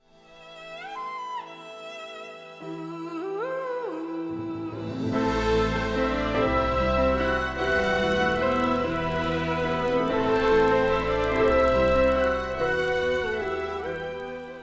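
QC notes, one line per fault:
7.52–14.62 s, resampler restarted on every block: a buzz at 25 Hz appears under the sound and is present only while signal is present. Each 40 ms block was converted on its own, so at every block edge the resampler filter lacked the real neighbouring samples and produced a small error. Repeating every 40 ms, these errors fuse into a rough tone rather than separate ticks. The band-limited character fits a downconversion from 44.1 kHz to 16 kHz.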